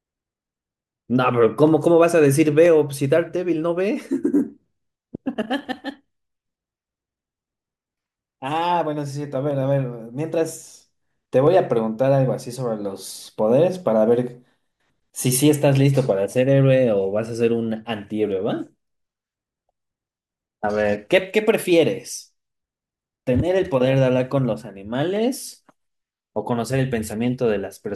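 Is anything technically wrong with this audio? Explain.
Yes. From 0.70 to 27.12 s, the speech carries a regular click about every 0.98 s. These are likely clock drift buffer slips, from a roughly 150 ppm clock mismatch.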